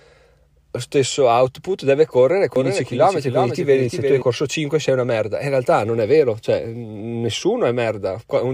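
Speech, and from 2.56 s to 4.22 s there's a doubled audio track: a second full-band copy trails the original by roughly 400 ms, sitting around 5 dB quieter. It has no decay or room colour, so it isn't a reflection, and it switches in and out abruptly at both ends. That most likely comes from the same signal being picked up a second time through a slower path, or from an edit leaving two offset copies overlapping.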